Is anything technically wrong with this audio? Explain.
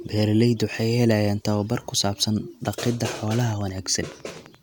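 Yes. From 3.28 to 4.56 s there is a train of clicks, likely from electrical interference or a faulty connection injecting a pulse into the signal. Around fifteen near-identical clicks arrive at a regular 11.8 per second, roughly as loud as the speech, giving a steady ticking over it.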